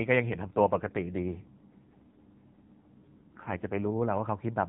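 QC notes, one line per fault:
0.32 to 3.92 s, AMR rate drop. The speech turns rougher, buzzier and more synthetic across this span, then clears. The band stays the same and nothing drops out. The network has told the AMR codec to spend fewer bits on the voice and more on error protection. The coarser sound fits a step down from 12.2 to 5.9 kbps. Before and after, the narrowband mobile codec adds only light colouring, with nothing above 4 kHz.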